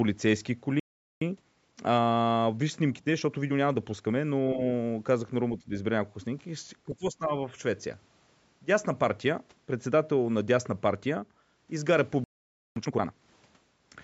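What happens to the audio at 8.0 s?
At 8.0 s the speech runs on intact, with no dropout, click or distortion, only the usual call microphone processing that trims the deepest bass.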